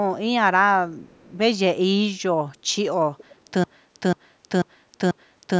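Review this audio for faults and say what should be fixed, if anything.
There's an echo leak at 0.92 to 1.37 s and again at 3.17 to 3.52 s: a copy of the speech trails by about 423 ms, very faint the first time (around 35 dB down) and louder the second (around 25 dB down). It's likely the far end's loudspeaker bleeding into its mic without the echo canceller fully removing it. A headset on that side, or better echo cancellation there, would stop it.

From 3.64 s to the end there's a broken-record loop: a 490 ms fragment repeats back to back four times, so whatever should have played after that point is gone. That's likely a stalled player, encoder or stream resending its last buffer. A watchdog that resets the stream when it stops delivering fresh audio would fix it.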